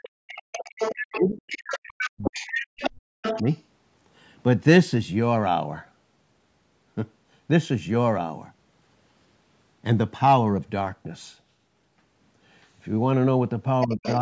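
A speech recording whose talker keeps dipping, thinning and breaking apart while a second voice intrudes, showing speech suppressed in double talk. The talker drops away from 0.0 to 0.79 s and 1.13 to 3.23 s, by as much as about 40 dB, with a brief shallower dip at 3.42 to 3.46 s and a drop of about 20 dB at 13.86 to 14.03 s. This is likely an echo canceller that cannot separate the near talker from loudspeaker echo while both people speak, so it turns both down. The other side's voice leaking through is audible at 0.35 to 1.2 s, 1.5 to 2.91 s and 3.22 to 3.58 s at nearly the talker's own level, and again, noticeably quieter, at 13.8 to 14.18 s. This is likely far-end audio from the device's loudspeaker that the echo canceller failed to remove from the microphone signal.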